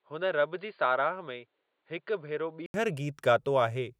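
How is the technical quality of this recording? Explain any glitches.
The recording has one clear fault. From the start to 2.74 s the speech sounds dull and boxy, with nothing above 4.7 kHz, a somewhat lower level and a faint added noise floor. An 80 ms gap at 2.74 s precedes full-band sound. This points to the input likely switched to a poorer device, such as a headset call profile, then back.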